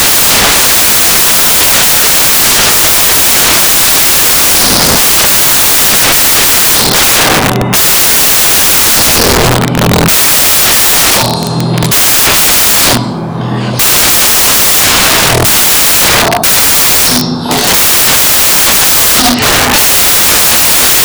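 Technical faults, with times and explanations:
throughout, samples built from the wrong bytes: the bytes of each sample are combined wrongly, misaligned by a byte, swapped in order, or read with the wrong alignment. The rapidly changing low-order bits end up as the large part of each value, so the result is loud, harsh broadband noise, close to white on loud sounds. The waveform is a dense block. The spectrogram shows flat broadband energy across all frequencies.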